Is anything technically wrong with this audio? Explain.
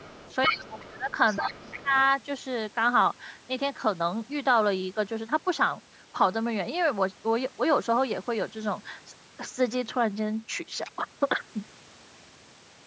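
Yes. Two related faults overlap in the first two seconds of this speech clip.

Other side's voice leaking through: a second voice is audible from 0.0 to 0.87 s, roughly 10 dB below the main talker, and again from 1.1 to 1.84 s, fainter at around 20 dB down. The likely cause is a loudspeaker on the talker's end feeding the far party back into the microphone, with the echo canceller leaving a residual that passes into the send path.

Speech suppressed in double talk: the talker's level drops sharply from 0.48 to 1.1 s and from 1.39 to 1.94 s, dipping as much as about 20 dB for roughly 0.5 s and 0.4 s respectively. Both windows coincide with the leaking far-end voice. Most likely the canceller could not separate near-end speech from echo while both were active, so it attenuated the whole signal and took the talker down with the echo.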